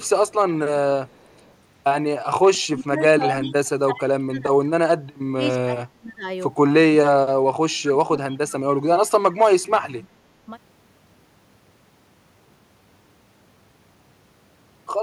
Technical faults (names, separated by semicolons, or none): echo leak; speech suppressed in double talk